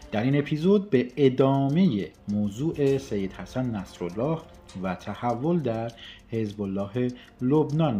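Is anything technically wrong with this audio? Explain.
Yes. From 3.96 to 4.00 s there is a brief, faint chirp or blip of misplaced energy peaking at only around -40 dBFS. This is a corrupt frame decoded: bit errors damaged a couple of compressed frames, and the decoder played them anyway. The misread gains and spectral codes put energy at the wrong frequencies for about the length of those frames, which is why the blip lasts so briefly.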